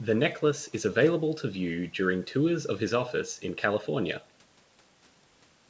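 Nothing's technically wrong here: it's speech carried over a wideband G.722 call at 64 kbit/s, and the usual call-style limit of nothing above about 8 kHz is just how that path normally behaves.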